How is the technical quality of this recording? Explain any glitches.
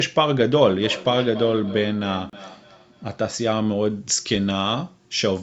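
The recording has three distinct problems: a device-to-device echo loop, a brief dropout, and a treble boost at the end.

From 0.69 to 3.29 s there is feedback echo between two devices. A second device in the room was on the same call and played back what this microphone sent. The microphone picked that playback up again, and its echo canceller could not remove sound it hadn't produced itself. Each phrase returns roughly a third of a second later, at about 14 dB below the speech, thinner and more ringing than the original.

Between 2.30 and 2.33 s, inside that echo stretch, the sound cuts to 33 ms of silence and then resumes. This is likely a Bluetooth stall: interference delayed the wireless packets, the headphones' buffer emptied, and playback paused until the resent data arrived. It is heard as a short hole in the speech rather than a click or a jump in pitch.

From 3.9 s to the end, pre-emphasis was left on. 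The treble was boosted by a curve that fits the CD 50/15 µs emphasis standard, but the matching de-emphasis was never applied. High frequencies stand about 8 dB stronger at 10 kHz than at 1 kHz, so the speech turns thin, bright and hissy on sibilants. This happens within a call path whose normal microphone processing already removes everything above 8 kHz.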